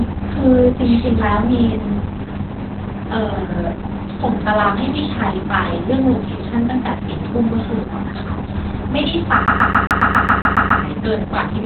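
Speech carrying heavy Opus voice compression throughout. Nothing reaches above about 4.2 kHz, so a spectrogram shows a hard ceiling there, with smeared, coarse harmonics below. That narrowband SILK coding makes the voice muffled, hoarse and faintly robotic, and the damage fits a very low bitrate of around 8 kbps. From 9.46 to 10.83 s the audio is a CD stuck on one turn. The same 0.14 s fragment plays about ten times, with a brief mute at each jump back, producing a fast, even stutter. On the waveform this shows as identical repeating blocks separated by thin gaps, and on the spectrogram as a regularly striped pattern.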